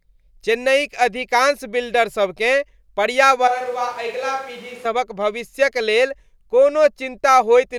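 From 3.48 to 4.85 s, speech abruptly turns hollow and roomy, about 5 dB quieter, with added room noise. Likely a switch to a distant microphone.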